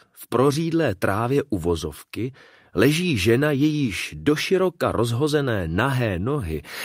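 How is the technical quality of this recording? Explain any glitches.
The technical quality of the recording is sound, with no glitches to explain.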